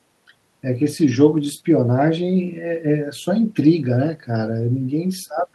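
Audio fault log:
Nothing stood out on listening to this speech recording.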